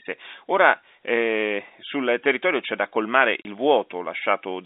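Right after "territorio c'è da colmare", at 3.42 s, the speech drops out for about 30 ms and comes back at 3.45 s. That's packet loss filled with silence: a packet went missing and the receiver played silence in its place instead of patching over it. A gap that size fits a single lost 30 ms packet. The hole has hard edges on both sides, and it sits in the narrow telephone band of the G.711 line, roughly 250 Hz to 3.7 kHz.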